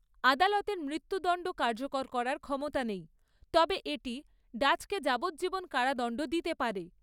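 No technical faults can be heard in this speech recording.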